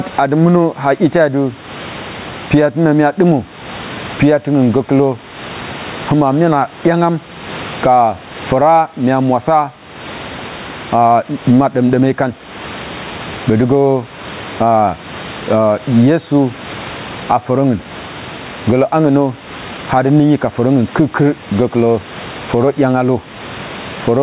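Gain pumping runs throughout the speech. The gain swings by about 20 dB and is pulled down under each loud syllable, likely from excessive input gain driving a fast limiter. The waveform shows flattened peaks, and a spectrogram shows nothing above the call path's 4 kHz ceiling.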